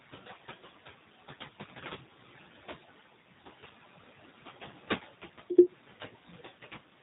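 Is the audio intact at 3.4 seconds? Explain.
No. At 3.4 seconds the leftover background noise dips in the gaps and swells back under the speech. These are noise suppressor artifacts, present throughout the clip. A suppressor estimates which frequency bands hold steady noise and pulls them down frame by frame, here by about 14 dB. The room noise, which sits about 20 dB below the speech, is what gets carved up into that unsteady residue.

The same moment also sounds muffled, rough and faintly synthetic, with the codec damage plainly audible. That is the G.729 codec, also present across the whole clip. At 8 kbit/s it does not carry the waveform itself. It resynthesises speech in 10 ms frames from a vocal tract filter, a pitch predictor and a handful of pulses. Everything above 4 kHz is gone, and the suppressor's noise residue is made to warble.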